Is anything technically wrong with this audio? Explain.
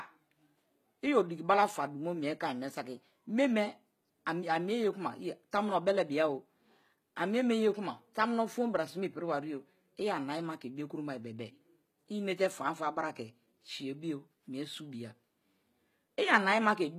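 Yes. Throughout the speech, the treble sounds synthetic: sibilants come out gritty and metallic, and upper harmonics don't line up with the lower ones. This is likely HE-AAC compression, rebuilding highs up to 20.2 kHz from copied lower bands, which fits a bitrate near 20 kbps.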